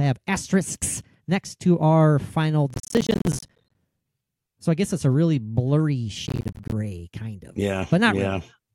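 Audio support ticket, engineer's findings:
Processor overload crackle, 2.70–3.75 s after "next to our final" and 6.27–6.72 s before "kind of": CPU missing deadlines on roughly 10 ms buffers, dropouts to silence, gritty tearing.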